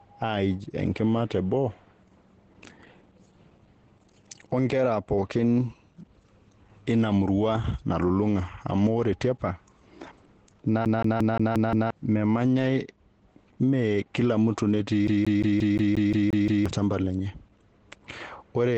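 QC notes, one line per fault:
throughout: Opus voice compression, SILK coding at a low rate that fits about 12 kbps, cuts everything above 8.9 kHz and coarsens the excitation, leaving the speech muffled, hoarse and faintly robotic.
10.85–11.90 s and 15.07–16.66 s: CD stuck on one turn. The read position jumps back every revolution, so a 0.18 s slice repeats 6 then 9 times with brief mutes, giving an even stutter.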